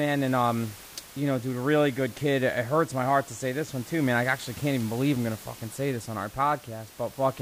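Listening to this speech recording, nothing stood out as a technical problem, and the faint room noise sitting about 20 dB below the speech is simply part of the recorded space.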